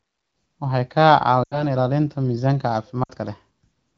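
A speech clip with two runs of lost AMR speech frames, at 1.44 to 1.64 s and 3.03 to 3.11 s. The wideband decoder stretches the last good frame with falling gain, so the sound smears and briefly fades. The gaps, roughly 80 and 60 ms, fit four and three 20 ms frames.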